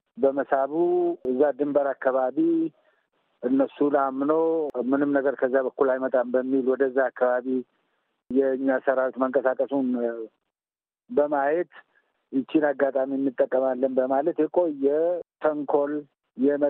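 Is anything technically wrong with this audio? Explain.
Yes. At 6.09 s there is a brief, faint blip, a short chirp of misplaced energy peaking around -35 dBFS. This is a corrupt frame decoded: flipped bits in a single compressed frame made the decoder misread its gains and codes, scattering energy into wrong frequencies.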